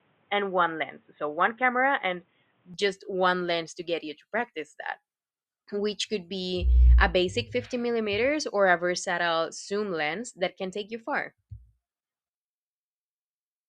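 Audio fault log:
0.00 to 2.74 s, input switched to a poorer device. The speech sounds dull and boxy for this opening stretch, with nothing above about 3.8 kHz. At 2.74 s the full band returns with no gap and no clear jump in level. A faint background noise from the narrower source sits far below the speech, at roughly 40 dB down. The likely cause is a brief capture through a lower-grade microphone or headset call profile before the proper input took over.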